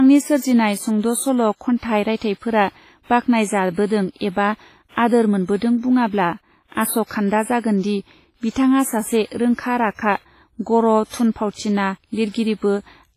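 Speech with WMA compression damage throughout: heavy ringing and a washy, smeared texture, with hiss that swells and fades with the signal and nothing above 15.3 kHz. This is likely a transform codec run at a low bitrate, consistent with about 24 kbps.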